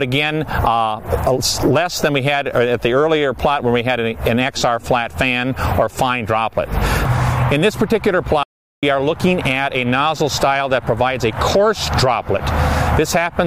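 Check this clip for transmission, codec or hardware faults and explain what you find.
One fault is present: a stream reconnect at 8.43 s to 8.83 s. The sound drops out for about 0.39 s and, when it returns, has jumped ahead by roughly a fifth of a second, so a short stretch of material is missing rather than delayed. The connection broke, the player fell silent, then reconnected and started a fresh decoder mid-stream at a later point, with its first frame or two muted or faded in.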